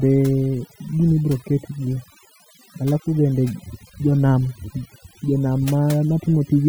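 From start to finish the speech carries overdone noise removal. A noise reducer was pushed too hard, pulling individual frequency bands down whenever they sat near its noise estimate. The quieter parts of the voice got dragged under too, leaving a background that drops away and breaks up into twinkly specks.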